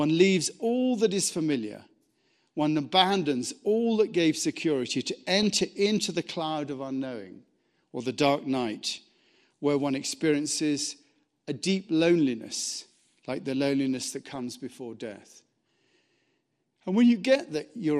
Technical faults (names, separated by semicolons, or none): MP2 compression; DAB burbling